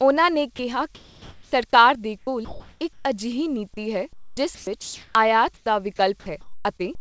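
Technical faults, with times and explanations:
0.56–0.59 s, 0.95–1.52 s and 5.57–5.66 s: sound dropped by the voice detector. The first gap comes right after "ਉਨ੍ਹਾਂ ਨੇ", the second ends just before "ਸਰਕਾਰ ਦੇ". Speech gives way to a flat, steady hiss for 30 ms, 570 ms and 90 ms, and about 20 ms, 270 ms and 40 ms of speech are lost. The likely cause is the sender's voice detector mistaking quiet speech for background and halting transmission, so the receiver filled in with synthetic noise. On a spectrogram, the harmonic and formant structure stops abruptly and is replaced by a smooth, even noise band. On the waveform, the envelope drops to a low, uniform level.
2.18–3.05 s: comfort noise in place of the background. For about 570 ms of this pause, the natural room background is replaced by a steady, featureless hiss. This is likely discontinuous transmission: the sender stopped sending during the pause, and the receiver generated noise roughly shaped to match the background. 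On the spectrogram, the irregular texture of the real background smooths into an even, unchanging wash with no fine detail. On the waveform, the pause looks unnaturally constant in amplitude.
2.25 s: onset clipped by the voice detector. When sound resumes inside that comfort-noise stretch, about 20 ms of its beginning is missing, so it starts abruptly without its soft attack. The likely cause is the voice detector reacting late to the restart. On a spectrogram, energy appears suddenly across all frequencies with a vertical edge and no gradual build-up. On the waveform, the amplitude jumps straight from the low noise floor to full level.
4.13–5.15 s and 5.96–6.85 s: sound chopped by the voice detector. The first stretch begins right after "ਅਜਿਹੀ ਨੀਤੀ ਹੈ". In both stretches, speech cuts in and out, with about 690 ms and 351 ms in total swapped for fill noise. The likely cause is the voice detector toggling repeatedly between sending and muting, so quiet syllables and word edges vanish. 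On a spectrogram, speech striations alternate with patches of smooth, uniform noise. On the waveform, the envelope is jagged and broken. Throughout the clip, the audio has no content above 8 kHz, which fits a wideband call codec.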